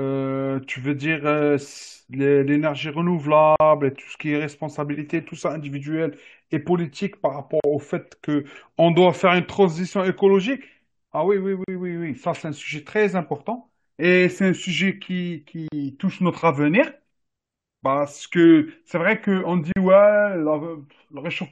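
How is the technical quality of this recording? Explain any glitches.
The speech is cut by short silent gaps at regular intervals. These are gaps at the joins of separately encoded pieces. They fall at 3.56, 7.60, 11.64, 15.68 and 19.72 s, one every 4.0 s. The first lasts 43 ms and the rest about 40 ms. Each piece kept its encoder's leading delay and its padded final frame. The gaps cut in and out with smeared edges. The speech then resumes where it stopped.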